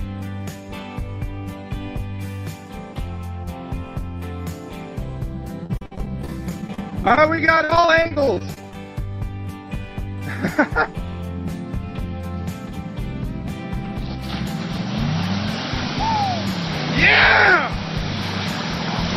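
Repeated packet loss (robotic sound) runs from 5.63 to 8.75 s. Dozens of brief dropouts, none longer than 53 ms, are each patched by stretching the preceding sound. With about a quarter of the span concealed this way, the audio turns choppy, with fragments missing.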